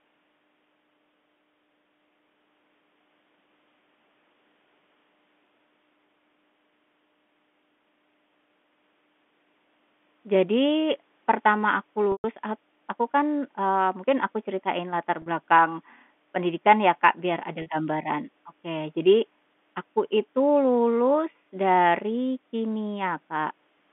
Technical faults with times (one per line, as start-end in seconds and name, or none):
12.12-12.24 packet loss with pitch repetition
15.22-15.26 packet loss with pitch repetition
17.62-17.66 packet loss with pitch repetition